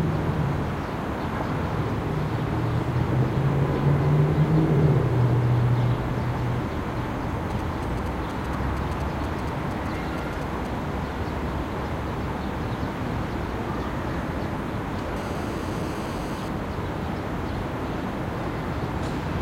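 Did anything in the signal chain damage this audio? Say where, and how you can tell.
Yes, in the analogue wiring. From 7.50 to 10.67 s there are GSM signalling bursts: a galloping dit-dit-dit of short buzzes repeating at 216.7 Hz, roughly 20 dB below the sound. A nearby 2G phone handshaking with its network sends brief clusters of radio bursts, and an unshielded input or cable rectifies them into audio. The broken, stuttering rhythm sets it apart from continuous call buzz, and its 217 Hz pulse rate rules out 50 or 60 Hz mains hum.

The analogue wiring also picks up GSM phone buzz from 15.17 to 16.49 s: a hard, raspy, harmonic-rich buzz at 216.7 Hz, about 19 dB below the sound, running without gaps for the whole stretch. This is a phone in an active call transmitting a burst 217 times a second, with the circuit demodulating each pulse. Unlike the earlier signalling clusters, it is unbroken. 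Its pitch bears no relation to the audio, so it is not distortion of the sound itself, and its fundamental is too high for mains hum.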